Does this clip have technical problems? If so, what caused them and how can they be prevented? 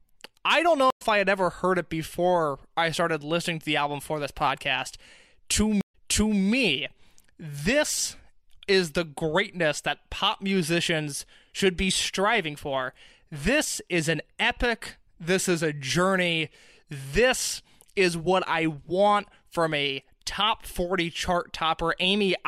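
Yes. A stream reconnect happens twice: the connection dropped, and the player reconnected and restarted its decoder mid-stream. At 0.90–1.02 s, after "I don't know", 100 ms of silence precedes a slight forward skip into "I had ever heard". At 5.81–6.41 s, 128 ms of silence precedes a restart 470 ms earlier, so that stretch repeats. A larger client buffer, with playback resumed at the exact position after reconnecting, would prevent this.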